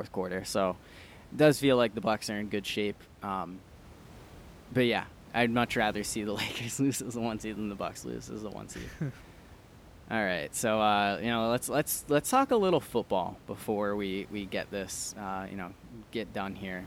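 No technical faults can be heard anywhere in this recording.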